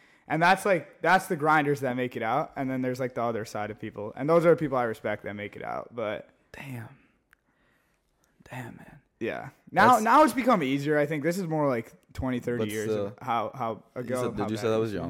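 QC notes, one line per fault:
Nothing stood out on listening to this speech.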